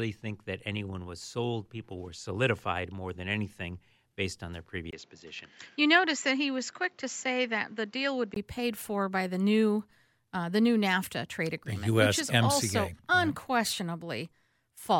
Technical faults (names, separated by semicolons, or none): input switched to a poorer device